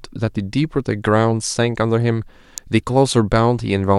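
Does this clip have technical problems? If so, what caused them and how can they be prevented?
Yes. At 2.58 s a single sharp snap cuts through the speech. It peaks fairly loud, near -10 dBFS. This is an electrical switching spike, likely from a nearby switch or static discharge arcing into the audio line. Shielded cables and distance from switching equipment prevent it.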